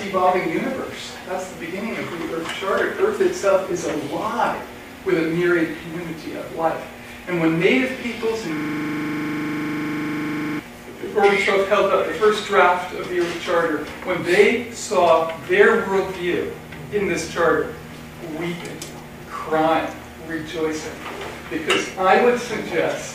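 A system hang loop runs from 8.57 to 10.59 s. The machine or its driver stalled while the audio hardware kept replaying the same 40 ms stretch of its ring buffer, cycling it around fifty times before output resumed. With each pass repeating exactly at 25 Hz, the audio collapses into a rough, rapid stutter that sits on the edge of a low buzz for about two seconds.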